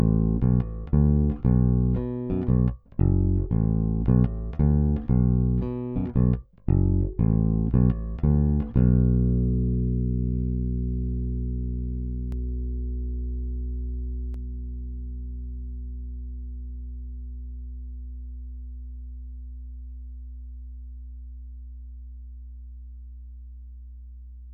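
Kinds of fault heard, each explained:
Doubled audio track: from 12.32 s to 14.34 s a second, full-band copy of the sound runs roughly 150 ms behind the original, about 5 dB quieter, with no decay or room colouring of its own, so it reads as a hard slapback rather than an echo. It cuts in and out abruptly at those points. The likely cause is the same signal reaching the mix twice, once through a slower capture path or an edit.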